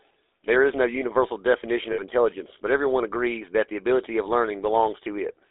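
Throughout, the speech has been squeezed through the GSM full-rate codec, which rebuilds the voice from a vocal-tract model and a coarse pulse excitation. Its audible damage fits a 13 kbps rate: a band of about 300 Hz to 3.6 kHz and a plainly buzzy, gravelly roughness.

From 1.92 to 2.03 s, lost GSM frames leave the decoder repeating its last good settings, which points to about three missing frames. Roughly 60 ms of sound is held as a rough, metallic ring before normal decoding returns.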